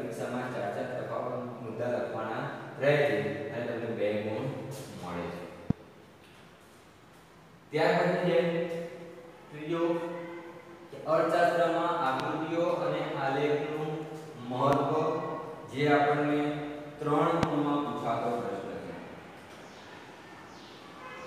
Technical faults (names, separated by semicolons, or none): loud pop